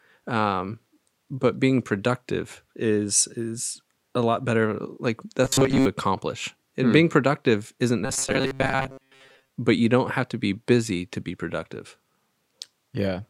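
Audio likely arrived too seldom, so about 7.5 ms buffers were replayed over most of the passing audio, producing robotic sound from repeated short buffers at 5.45 to 5.86 s and after "hmm being productive isn't" until "but you don't have" (8.05 to 9.49 s): a rigid metallic 134 Hz buzz.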